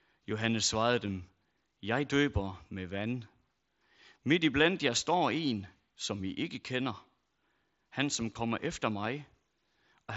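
At 1.07 s and 8.34 s, concealed Bluetooth headset packet loss patches about 15 ms, which fits two lost frames, by repeating the preceding waveform. It sounds like a brief buzzy tone held at full level, with a small warble where real audio returns, rather than a silent gap.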